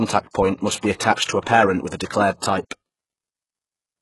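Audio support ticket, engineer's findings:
Speech, throughout: treble bright but synthetic, s sounds gritty, metallic and lispy, nothing above 11.5 kHz. Likely HE-AAC compression: lower band coded, upper band copied up by spectral band replication, so harmonics misalign at the crossover. Heavy damage, which fits a bitrate near 12 kbps.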